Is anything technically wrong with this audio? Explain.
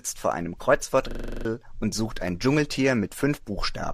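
Yes, there are two faults.

From 0.58 to 0.61 s there is AAC frame loss with concealment. The decoder, missing roughly two frames, rebuilt the gap from the last good spectrum, so this 30 ms stretch sounds smeared instead of cleanly continuing.

From 1.11 to 1.45 s a system hang loop repeats one 42.67 ms slice eight times at 23.4 Hz, which fits a 2048-sample ring buffer cycling while the system froze. It comes across as a rapid stutter, with around a third of a second of new audio lost.

Faint roughness from what is likely low-delay AAC coding sits beneath both.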